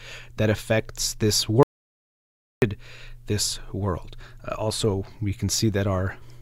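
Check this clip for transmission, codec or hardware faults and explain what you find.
One fault stands out, an audio dropout to silence. Just after "that affects this", at 1.63 s, the speech cuts off mid-flow and the clip falls into dead digital silence, with no room tone at all, until the sound resumes abruptly at 2.62 s. Roughly one second of speech is simply missing. The likely cause is the input being lost for that stretch, through a disconnect, a failed link or an accidental mute, while the recorder kept writing silence.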